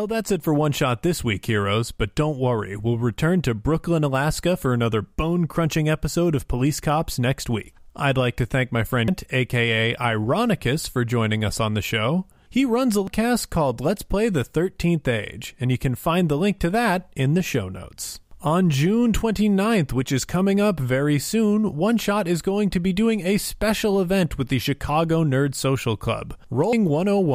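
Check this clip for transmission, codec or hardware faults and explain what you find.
The clip has one kind of fault, occurring three times. Damaged data in a compressed stream appears at 9.08 s, just after "like to thank my", at 13.08 s, just after "runs a", and at 26.73 s. Corrupted bytes make the decoder misread frames and lose sync while it hunts for the next valid header, leaving a brief chirp or blip in the speech.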